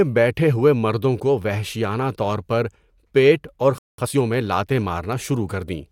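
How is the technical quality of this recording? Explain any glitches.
There's one real hiccup in the speech, a stall followed by a rushed recovery, both around the 4-second mark.

Playback stall, 3.78 to 3.98 s: right after "طور پر پیٹ اور" the audio drops to silence for about 200 ms, then resumes. That's most likely the player running dry on buffered data or its thread getting blocked, so nothing reached the output until it caught up.

Time-compressed catch-up, 3.98 to 4.18 s: coming out of the gap, the player plays at twice normal speed, up to "میں لاتیں", to make up the lost ground. It trims and cross-fades tiny slices, so the pitch stays put but the words sound hurried.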